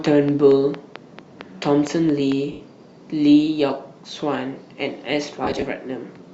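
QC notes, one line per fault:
0.06–2.33 s, train of clicks: a series of roughly ten clicks arrives at a steady pace of about 4.4 per second, each with much the same sharp shape and peaking around 10 dB above the surrounding sound, so they tick clearly through both the sound and the gaps. The regular spacing and near-identical shape of the pulses point to something injecting them from outside the signal, likely electrical interference from nearby equipment or a faulty connection or power supply.
2.52–2.60 s and 5.44–5.62 s, lost LE Audio frames: the first dropout is a single 80 ms hole, consistent with about eight consecutive 10 ms frames going missing. The second spreads 90 ms of losses across 180 ms in short bursts, the longest around 30 ms. In each case the LC3 decoder conceals the hole by repeating the last good spectrum with randomised phase signs, so tonal content turns into a brief noisy smear. 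In the longer 80 ms gap, the level sinks as the concealment fades out after its first few frames.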